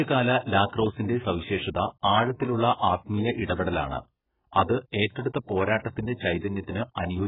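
From start to finish, the speech has likely been through AAC compression at a very low bitrate, consistent with AAC-LC near 8 kbps. The encoder discards everything above about 3.8 kHz, leaving the speech dull, muffled and heavily smeared, with sibilants stripped of their crispness.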